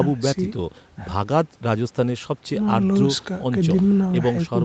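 Listening to this speech recording, nothing stood out as a technical problem.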